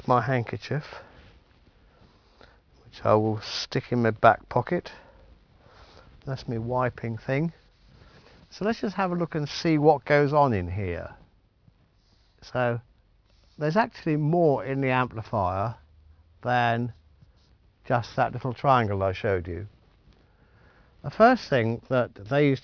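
Aliasing runs through the whole audio: content above about 5.5 kHz folds back as gritty, unrelated tones roughly 25 dB down, which fits a drop from 44.1 kHz to 11 kHz without filtering.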